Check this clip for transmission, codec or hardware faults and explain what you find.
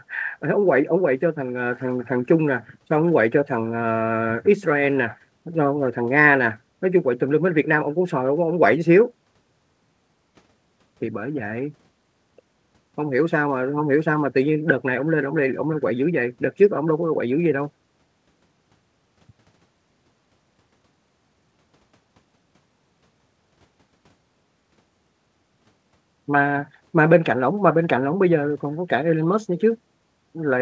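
No transmission, codec or hardware faults can be heard in this speech clip. It has passed through a call path whose audio stops at 8 kHz, which fits wideband G.722 at 64 kbps, and that band limit is what a working path of this kind sounds like.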